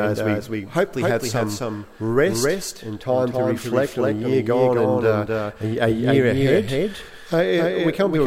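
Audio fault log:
Throughout, doubled audio track: a slower capture path or out-of-step edit likely adds a copy about 300 ms late, about 5 dB down, heard as a dry, full-band repeat.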